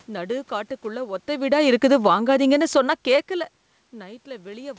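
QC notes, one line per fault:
1.3–3.59 s, automatic gain falling: the gain control judged the input too loud or its background noise too strong and eased its gain down by about 6 dB, so the speech and the room noise sink together. The talker's own movements near 1 s and 3 s leave the background level unchanged. On the waveform, the envelope tapers smoothly across the span. On a spectrogram, the noise floor darkens along with the speech, all beneath the 8 kHz ceiling of the G.722 call path.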